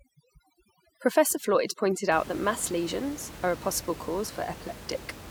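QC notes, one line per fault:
0.00–2.12 s, overdone noise removal: the noise reduction is set too hard, pulling individual frequency bands down to nothing wherever they sit close to its noise estimate, so the background drops and breaks up into twinkling specks until "out that mass lesions", where it recovers.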